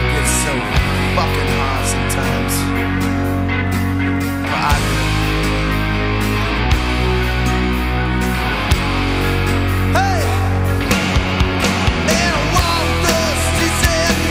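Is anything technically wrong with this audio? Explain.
Yes, there is integer overflow: sharp cracks at 4.71, 8.72, 9.96, 10.92, 12.11, 12.57 to 12.59, 13.09 and 13.84 to 14.07 s. Loud peaks exceed the integer range and wrap to the opposite sign rather than being held at the limit. Each wrap produces a full-range jump, which sounds far harsher than clipping's flattened, buzzy distortion.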